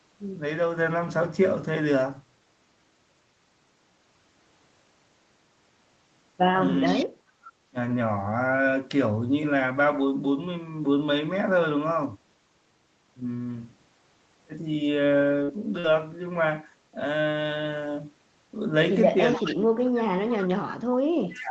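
Around 6.85 to 7.05 s there's an echo leak: a faint copy of the speech, about 15 dB down and trailing by about 426 ms, comes back through. The far end is likely on a loudspeaker and its echo canceller isn't removing everything the mic hears. Right on top of that, from 6.95 to 7.16 s, the speech is suppressed in double talk. It drops by roughly 30 dB for about a fifth of a second, likely because the canceller couldn't tell the talker from the echo and turned both down.

At 15.43 to 15.51 s and again at 15.80 to 15.87 s there's short concealed packet loss. Each time about 40 ms never arrived, and the decoder filled the gap by stretching the last sound. You hear a brief smear or wobble where it blends back in.

The end of the clip is worst. Echo leaks through at 19.31 to 19.55 s (about 10 dB down), very faintly at 19.85 to 19.89 s, and again at 21.31 to 21.41 s, all with that same 426 ms lag. 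From 19.36 s to the end, double-talk suppression keeps pulling the speech down, by up to roughly 35 dB.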